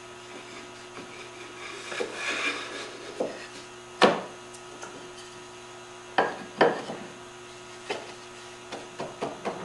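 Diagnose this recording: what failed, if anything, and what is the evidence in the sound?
Nothing in the signal points to a failure at any stage, from the analogue wiring and converter through the buffer, format conversion, network and storage to playback, so there is no fault to diagnose here.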